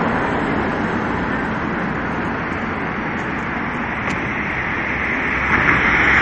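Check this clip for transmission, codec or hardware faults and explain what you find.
One fault runs through the whole clip: MP3 compression, plainly audible. The treble stops dead at 10.5 kHz, and weak spectral detail flickers in and out between frames, giving a watery, swirling texture with metallic chirps on bright transients and smeared attacks. The likely cause is an encoder starved of bits, consistent with roughly 44 kbps, cutting the top band and zeroing quiet frequency lines. A simple low-pass filter would dull the top end without this swirl.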